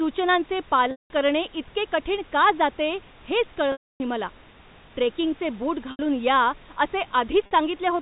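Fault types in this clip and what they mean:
Packet loss with pitch repetition: chunks of the stream go missing, and the receiver fills each hole by looping the last pitch cycle it had, fading it over about 50 ms. The 50 ms gap at 7.46 s and the 80 ms one at 5.91 s, right after "ट्रेकिंगचे बूट", come across as a brief buzzy hold. The 190 ms dropout at 0.91 s, just before "करणे इतके कठीण का", and the 280 ms one at 3.72 s, after "कठीण का जाते हेच", buzz, then fade to silence before the speech cross-fades back in.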